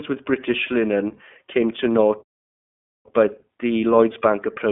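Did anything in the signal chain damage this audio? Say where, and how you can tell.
Yes. Throughout, the speech sounds rough and slightly synthetic, with nothing above about 3.8 kHz. This points to the iLBC codec, coding each 20 ms frame independently at what fits its 15.2 kbps mode.

At playback, the sound cuts out mid-flow from 2.22 to 3.06 s, about 0.83 s of silence, then resumes. This is likely a playback stall, the player starved of data.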